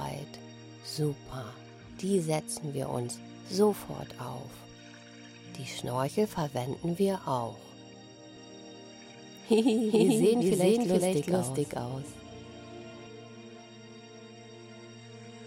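From 8.37 s to 13.07 s the sound is heard twice. This is a doubled audio track: a second copy trails about 400 ms behind at roughly equal level. It is full-band and dry, and it starts and stops abruptly. Likely a slower capture path or misaligned edit.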